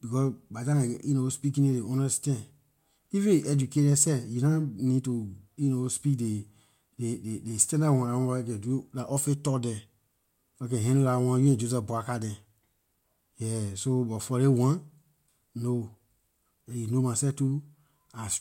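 Speech recording with no audible technical faults.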